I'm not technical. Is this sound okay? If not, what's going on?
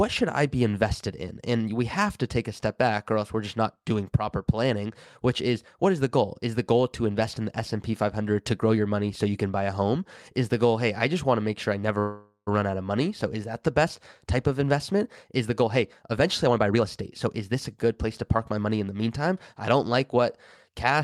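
No. At 11.99 s, after "to make sure I", there is a call audio freeze. The last sound hangs as a fading buzz, then briefly goes silent. The audio resumes at 12.49 s with "run out of money", with nothing lost. Delayed network packets are the likely cause.

Then comes a jitter buffer speed-up. The phone trims tiny slices to catch up. From 15.31 to 15.77 s, after "best type of investment", the audio runs about 14% fast. From 16.17 to 19.19 s, just before "I don't", it runs about 13% fast. The pitch stays the same, but it sounds hurried.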